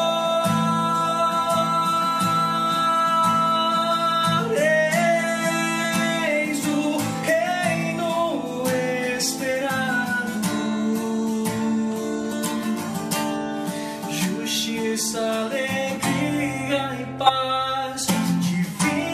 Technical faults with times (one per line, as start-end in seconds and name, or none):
4.37 compressed frames skipped
5.83 compressed frames skipped
7.22 compressed frames skipped
9.68 compressed frames skipped
12.31-12.34 compressed frames skipped
17.25-17.30 compressed frames skipped